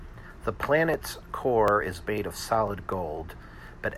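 Regular small ticks run through the speech from 0.19 to 3.92 s, one every 0.25 s. These are periodic USB or driver dropouts: a recurring block on the bus or driver skips about a millisecond of audio each time, leaving a click at each gap that falls on speech.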